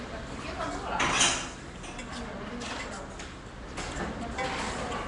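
This is a recording of everyday sound with a rough, hissy halo, a smeared, underwater quality and nothing above 10.6 kHz, all plainly audible throughout. That's likely Nellymoser compression, whose fixed-bit blocks starve weak bands and fill them with noise, consistent with a 44 kbps stream.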